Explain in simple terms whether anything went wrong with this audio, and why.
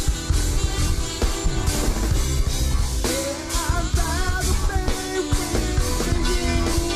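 Nothing went wrong here: listening closely, there's no moment where the sound breaks up, jumps, drops out or gets distorted, so there's nothing to point to or explain.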